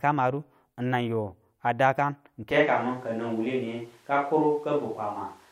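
At 2.51 s, right after "a dakan", the sound turns roomy and hollow. The bass thins out. Background noise rises to about 35 dB below the speech. Loudness barely changes. This is likely a switch to a distant microphone. It lasts to the end.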